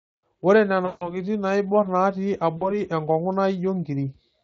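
At 0.85 s the speech drops into VoIP packet loss concealed by the speech codec: about 160 ms of audio is missing, which fits a run of eight 20 ms frames. The decoder keeps repeating its last pitch and spectral envelope at falling gain, so the sound smears into a buzzy tone or coloured noise that fades until about 1.19 s. A shorter gap of about 40 ms follows at 2.57 s, and the weakened sound lingers until 2.79 s.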